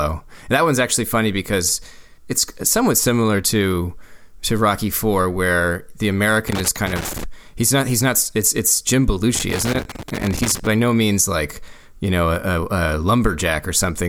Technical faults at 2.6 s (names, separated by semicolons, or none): none